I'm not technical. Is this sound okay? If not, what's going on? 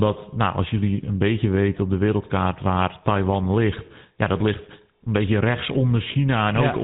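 No. The speech went through a GSM full-rate codec, the old mobile phone system, which drops everything above 3.8 kHz and leaves a buzzy, gravelly roughness throughout.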